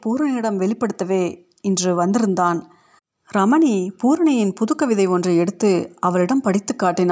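From 0.05 s to 1.94 s the speech and the background noise behind it swell together, growing about 4 dB louder over nearly two seconds before settling. This is automatic gain rising: the call's level control judged the incoming signal too quiet and gradually raised its gain. Because it boosts everything it receives, the background noise climbs along with the voice. The call microphone processing itself leaves nothing above 8 kHz, as expected for this path.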